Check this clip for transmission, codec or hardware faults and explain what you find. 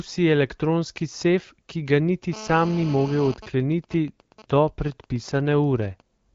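Two faults are present, both interference from a 2G mobile phone near the recording or playback chain, heard over wideband speech that carries the light coding texture of an HD Voice link at what sounds like the 12.65 kbit/s rate.

GSM phone buzz, 2.33 to 3.34 s: a hard, raspy buzz at about 217 Hz with a dense stack of harmonics sits about 15 dB below the speech and ignores it entirely. The phone is in an active call, transmitting a radio burst every 4.6 ms. An unshielded input or amplifier stage rectifies each burst, turning the RF envelope into a square-ish audio pulse train at that repeat rate.

GSM signalling bursts, 3.36 to 6.01 s: the steady buzz gives way to even ticks with a longer 217 Hz buzz twice a second, roughly 20 dB below the speech. The phone is still in the call, but its user has gone quiet, so discontinuous transmission sends only sparse groups of bursts. The same rectification in the audio circuit turns each group into a short clicky burst, producing the broken, rhythmic pattern.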